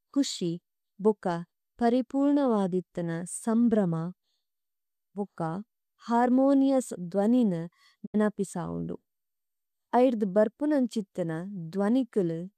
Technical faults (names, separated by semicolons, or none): digital broadcast dropout